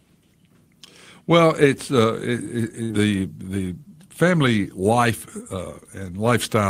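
At 2.83 s the speech briefly smears into a held, fading sound for about 60 ms, then jumps ahead into "the the family" with a short stretch of speech simply gone. This is a burst of packet loss lasting until about 2.93 s. The receiver lost several consecutive packets, so it stretched out the last sound it had and faded it down. When audio resumed, roughly 60 ms of the original speech had been skipped.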